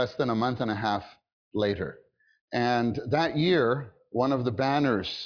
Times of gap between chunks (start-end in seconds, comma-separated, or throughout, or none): none